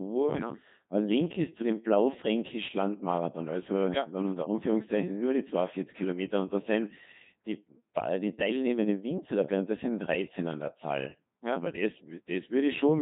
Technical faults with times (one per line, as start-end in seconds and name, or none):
0.00-13.02 Codec 2 vocoder